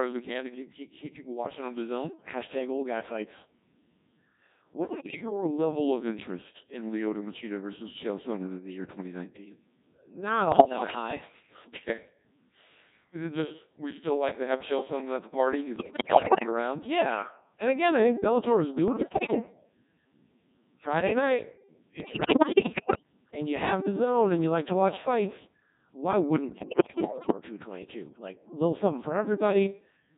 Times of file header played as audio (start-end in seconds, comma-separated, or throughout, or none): none